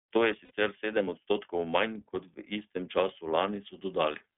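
Throughout, the iLBC codec confines the speech to roughly 250 Hz to 3.5 kHz, leaving it plainly rough and synthetic. A spectrogram shows empty space above 3.5 kHz. From 0.45 to 0.51 s, lost iLBC frames are concealed by repeating the last pitch cycle with added noise, producing a brief buzzy held vowel. The 60 ms gap fits two missing 30 ms frames, and it appears as periodic waveform repeats that recover immediately.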